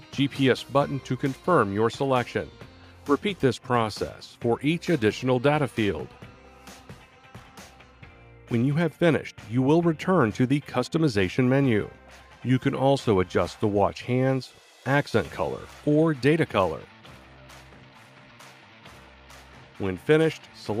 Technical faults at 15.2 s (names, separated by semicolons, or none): none